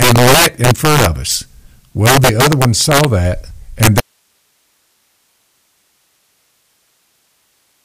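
From the start of the speech, integer overflow breaks up the louder passages. The gain is pushed about 8 dB past full scale, and instead of being limited, the sample values that exceed the integer range wrap around to the opposite extreme. Only a few percent of samples are affected, but each one jumps across the whole range, so every loud peak produces a harsh, violent crack. The cracks are much sharper and more abrupt than ordinary clipping distortion.

At 4.00 s, just after "one saw that and", there is an audio dropout to a faint residue. The speech stops instantly rather than pausing or fading, and it does not return before the end of the clip. The gap holds only steady hiss, roughly 50 dB below the earlier signal level. The likely cause is that the source signal was lost while the downstream path stayed live and kept passing its own noise floor.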